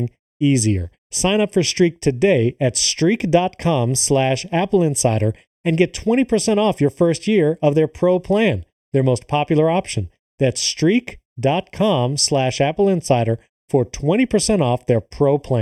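A speech recording with channel delay (comb filtering) throughout. One channel arrives a fraction of a millisecond late, and the two are summed to mono. Parts of the signal common to both then cancel at evenly spaced frequencies. The first deep notch sits around 1.5 kHz, with more spaced evenly above it. The result is a hollow, phasey quality that never changes, because the delay is fixed for the whole clip.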